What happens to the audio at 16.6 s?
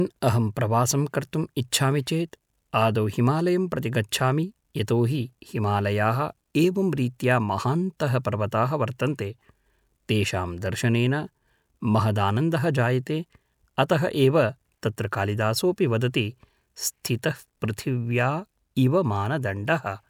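Nothing goes wrong at 16.6 s: the speech carries on without any dropout, click, distortion or other audible fault at that point.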